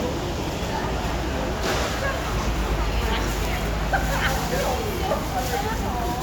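No technical faults can be heard anywhere in this recording of sounds.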